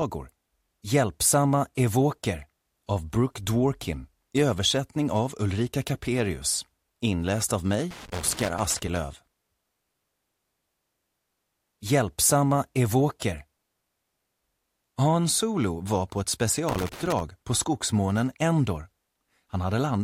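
Loose connector crackle breaks in from 7.91 to 8.97 s and again from 16.69 to 17.21 s. A worn contact rapidly makes and breaks, chopping the signal into irregular scratchy bursts, unlike evenly spaced digital clicks or clean dropouts.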